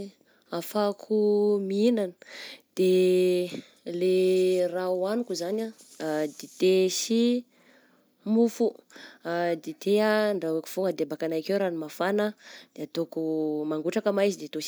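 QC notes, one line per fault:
No fault to list in the QC notes for this speech clip.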